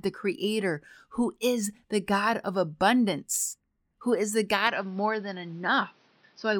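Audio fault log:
4.67–6.60 s, input switched to a poorer device: the speech abruptly turns duller and boxier with no gap, nothing above about 6.1 kHz, and a faint new noise floor roughly 30 dB down, at much the same level. This likely comes from the input moving to a narrower-band microphone.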